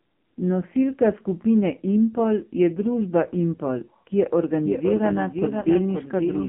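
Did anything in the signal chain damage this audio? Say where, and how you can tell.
Yes. The codec stage: the speech has been through the AMR narrowband mobile codec at 5.9 kbps, and the damage is heavy. It sounds buzzy and synthetic. On a spectrogram the energy sits within about 150 Hz to 3.4 kHz, with nothing above, which is the mark of a low-rate narrowband mobile encoding.

From 4.65 s to the end there is a doubled audio track. A full-band copy about 5 dB quieter trails by about half a second. It begins abruptly and has no reverberant decay. The waveform shows the envelope repeated with that offset. The likely cause is a second, slower capture path or a misaligned edit.

The network stage: at about 5.62 s one 20 ms speech frame was lost. The decoder filled the gap by reusing the previous pitch and vocal-tract settings at reduced gain, which gives a brief dip or warble. The waveform shows a short amplitude sag there.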